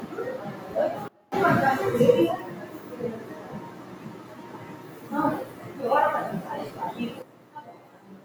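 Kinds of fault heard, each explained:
Noise suppressor applied to music or sounds: The sound pumps and thins out throughout, with its level swinging by about 15 dB as steady parts and ambient tails are pulled down. A speech-oriented noise suppressor is mistaking these sustained sounds for background noise and attenuating them.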